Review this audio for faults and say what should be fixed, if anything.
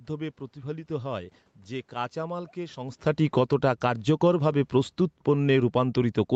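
Automatic gain falling runs from 3.22 to 4.15 s. Just after the talker shifts position around 3 s, the gain control cuts level by about 9 dB, and speech and background sink together.

Automatic gain rising follows from 4.11 to 4.86 s. The control finds the input too quiet and lifts gain by about 5 dB, so voice and room noise swell back up.

To prevent this, slow the gain control's attack and release, or widen its target window, so brief level changes from talker movement don't trigger pumping.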